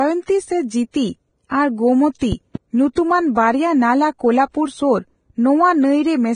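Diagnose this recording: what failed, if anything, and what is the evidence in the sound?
The whole clip has heavy codec damage, most likely Vorbis compression at a low bitrate, something near 22 kbps. Nothing survives above 9.7 kHz, and the treble that remains is grainy and hissy. That's the floor-plus-residue coder quantising the highs into noise.

There's pre-echo at 2.19 to 2.21 s, spreading about 27 ms, and again at 2.93 to 2.97 s, about 34 ms, just before "ᱵᱟᱨᱭᱟ ᱱᱟᱞᱟ". In both places hiss leads the attack because the block's quantisation noise smears into the quiet stretch ahead of it.

Between 2.32 and 2.58 s there are two loud pops, peaking around 10 dB above the speech, which carries on underneath. The likely cause is an electrical pulse added in the analogue wiring or at the driver, from a plug, a switch, static or a glitch.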